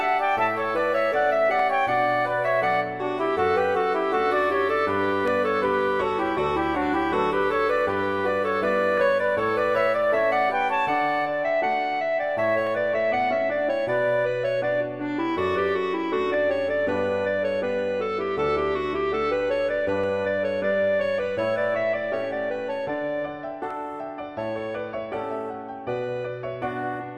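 A click recurs every 3.69 s from 1.59 to 23.71 s. These are clock drift buffer slips, likely from clocks mismatched by around 50 ppm dropping or repeating a few samples.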